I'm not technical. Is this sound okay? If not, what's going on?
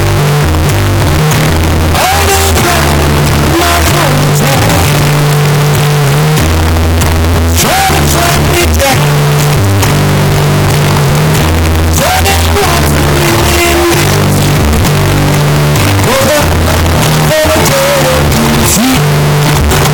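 No. The audio was most likely decoded with signed and unsigned mixed up: the 16-bit samples were read in the wrong number format, so every quiet moment flips to full volume. Throughout the clip this sounds like harsh, very loud distortion, with no soft passages at all.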